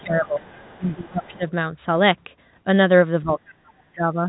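A short stretch of telephone-band speech, cut off near 3.9 kHz, shows speech suppressed in double talk three times: 0.00 to 0.53 s, 0.77 to 1.43 s, and 3.22 to 4.28 s. In each, the talker's level sinks by about 20 dB in the first two and about 30 dB in the last. The likely cause is an echo canceller that could not tell the near talker from the loudspeaker echo and attenuated both together. On a waveform these show as pinched, uneven envelope sections. On a spectrogram the harmonic bands fade or gap. Overlapping the first two dips, the other side's voice leaking through appears from 0.24 to 0.81 s and from 1.03 to 1.51 s. It is a faint second voice about 30 dB under the main speech, likely residual loudspeaker echo the canceller failed to remove from the microphone. Visually it forms a weak, separate harmonic pattern, low in energy and unrelated to the main talker's pitch contours, barely rising above the floor in the waveform.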